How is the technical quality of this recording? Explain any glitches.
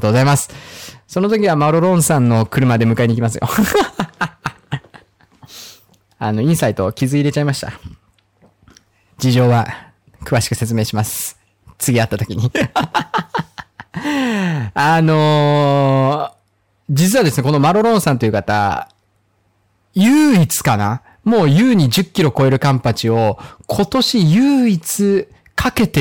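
The recording is compromised by hard clipping that runs from start to finish. The speech is driven roughly 8 dB beyond what the signal chain can pass, so every peak that exceeds the ceiling is sheared off flat, affecting something like one sample in twenty. Those squared-off tops generate harmonics high in the spectrum that were never in the original, and the result is a harsh, gritty fuzz on each louder syllable rather than occasional isolated crackles.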